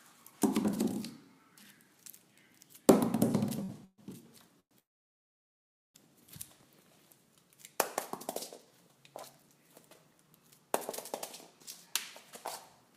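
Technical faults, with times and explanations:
3.63–3.71 s, short stall from a late packet: a sound is held about 53 ms too long, with a faint buzzy smear. A packet arrived late, the jitter buffer ran dry, and the receiver stretched the last sound until it came, then resumed with nothing lost.
3.85–4.00 s, 4.60–4.73 s and 4.79–5.96 s, call audio freeze: the sound hangs as a fading buzz, then drops to silence for about 40 ms, 80 ms and 1.1 s. The likely cause is packets held up in transit emptying the jitter buffer. Playback resumes where it stopped, adding gaps of 132 ms, 108 ms and 1.16 s with nothing missing.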